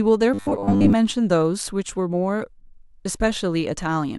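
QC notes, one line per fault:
0.34–0.93 s, robotic sound from repeated short buffers: for most of this stretch the speech becomes a rigid, metallic buzz at 100 Hz that still loosely tracks the words. The likely cause is audio arriving too seldom, so a 10 ms slice is looped to fill the gaps while real audio is skipped. On a spectrogram this shows as evenly spaced horizontal harmonics every 100 Hz; the waveform shows identical 10 ms cycles repeating.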